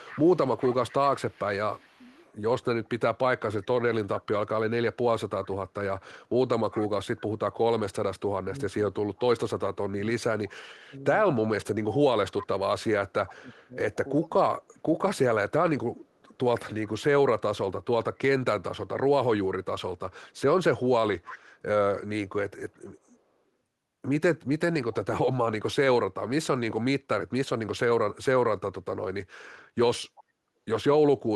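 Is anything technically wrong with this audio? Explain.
Yes. The speech has two faults.

An echo leak runs from 0.05 to 7.21 s and again from 12.38 to 24.95 s. A faint copy of the speech trails it by 391 ms. It sits about 20 dB down at first, then about 15 dB down. The likely cause is a loudspeaker's echo canceller letting sound through.

Speech suppressed in double talk occurs between 7.56 and 14.98 s. The speech dips in pieces, by up to about 25 dB, for around three seconds in total. This likely happens because the canceller mistook the talker for echo while both sides spoke.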